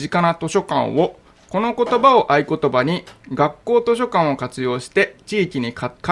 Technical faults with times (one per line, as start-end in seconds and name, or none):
none